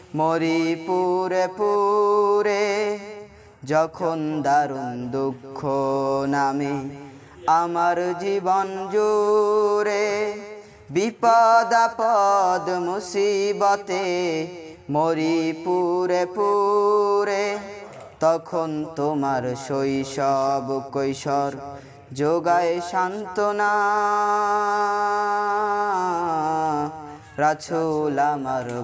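Nothing stood out on listening to this recording.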